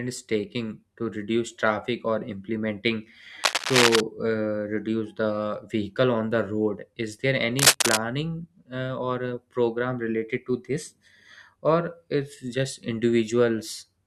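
Cable scratch noise appears in this speech clip from 3.43 to 4.01 s and from 7.59 to 7.97 s: dense, uneven rustling bursts a few dB louder than the voice, likely from a worn cable or connector being moved, its contact resistance fluctuating rapidly.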